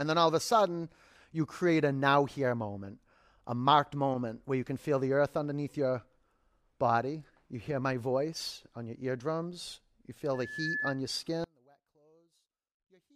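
At 10.34 s a loudspeaker feedback squeal begins. A microphone is picking up the speaker it feeds, and the loop gain passes one at 1.7 kHz. The tone swells over about 0.4 s to roughly the speech level. It stops at 11.01 s.

From 11.44 s to the end, the speech suddenly drops by about 35 dB and turns faint. The likely cause is one channel inverted. The two channels then cancel when summed to mono, leaving only their small difference.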